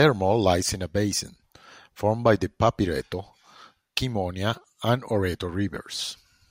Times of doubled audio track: none

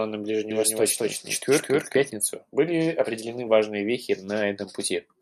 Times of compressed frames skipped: none

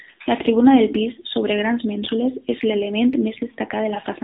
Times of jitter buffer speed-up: none

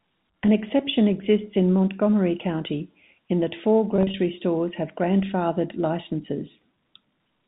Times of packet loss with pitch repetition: 3.96-4.14

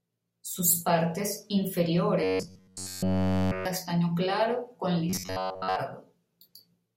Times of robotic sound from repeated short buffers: 2.24-3.65, 5.10-5.77

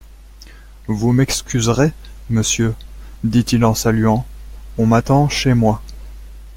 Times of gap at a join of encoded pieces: none

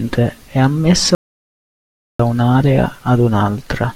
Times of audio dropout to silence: 1.15-2.19

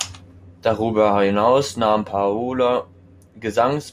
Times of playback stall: none

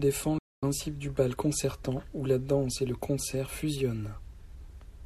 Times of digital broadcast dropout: 0.38-0.63

